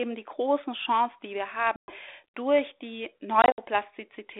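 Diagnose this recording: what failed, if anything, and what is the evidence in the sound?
Speech drops into hard-edged silence at 1.76–1.93 s, just after "die wir", then again at 3.42–3.59 s, returning slightly distorted. This is network packet loss on an ADPCM call. About 120 ms and then 100 ms went missing, roughly seven and five packets, with the second loss scattered across 160 ms and its longest run 60 ms. The decoder's adaptive predictor and step size briefly fell out of step with the sender's.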